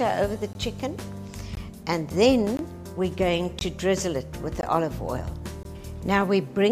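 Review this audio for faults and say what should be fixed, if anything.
Six short holes of 20 ms each break the sound at 0.53–0.55, 1.55–1.57, 2.57–2.59, 3.59–3.61, 4.61–4.63 and 5.63–5.65 s. This is a gap between chunks: the audio arrives in 1.0 s pieces, and silence is inserted at each join. To prevent it, play chunks back to back from a continuous buffer, trimming any codec padding.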